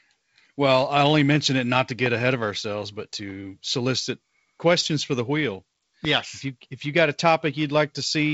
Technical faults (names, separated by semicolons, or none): loud pop